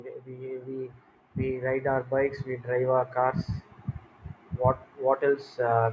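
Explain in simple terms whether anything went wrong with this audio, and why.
Automatic gain rising, from 0.26 to 3.47 s: the call's level control judged the speech too quiet and slowly turned it up, so voice and background swell together.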